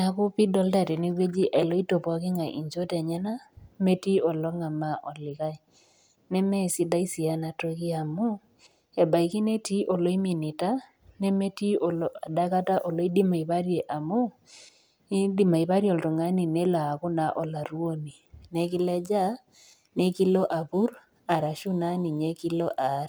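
From 18.47 s to the end, the speech picks up a gritty, inharmonic fizz: crude rate conversion, likely 44.1 kHz to 48 kHz by repeating samples, unfiltered.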